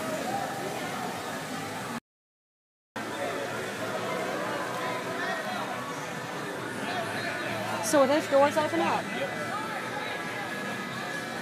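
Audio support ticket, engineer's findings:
Hard cut to silence 1.99–2.96 s, no room tone, about 0.97 s lost. Audio dropout to silence, likely input link lost while recorder kept writing silence.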